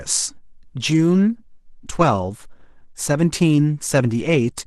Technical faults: adaptive stream at a lower bitrate

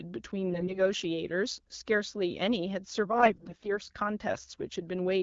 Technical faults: AMR bit errors

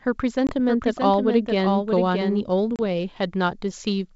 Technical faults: packet loss on an ADPCM call; doubled audio track

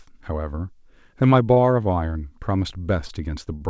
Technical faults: short stall from a late packet

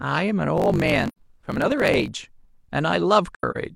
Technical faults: block size mismatch (truncated); AAC frame loss with muting

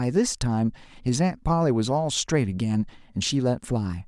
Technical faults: none

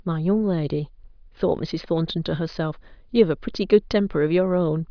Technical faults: none

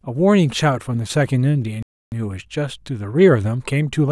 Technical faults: playback stall

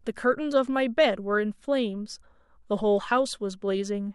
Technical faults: none

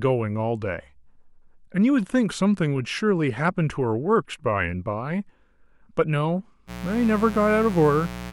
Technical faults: mains buzz

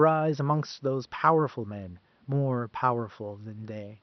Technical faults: none

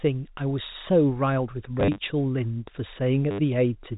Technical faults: packet loss with last packet repeated

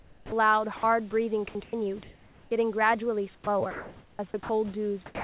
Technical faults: comfort noise in place of the background; onset clipped by the voice detector; sound dropped by the voice detector; sound chopped by the voice detector

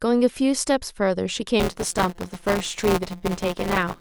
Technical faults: buffer tearing

